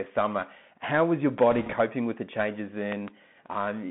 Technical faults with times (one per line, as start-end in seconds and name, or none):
0.00-3.90 Bluetooth CVSD headset codec
1.38-1.40 loud pop
1.51-1.74 bit errors on a Bluetooth voice link
2.92-3.10 loud pop